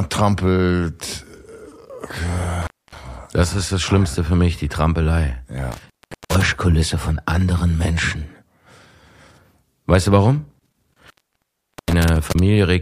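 The audio cuts out three times from an intermittent contact, a loose cable or plug briefly opening the signal path: between 2.62 and 2.97 s (open for about 256 ms), between 5.72 and 6.48 s (about 404 ms), and between 10.59 and 12.39 s (about 779 ms). Unlike a digital dropout, which falls to clean silence, each break has crackle at its edges and leaves faint hiss while the line is open.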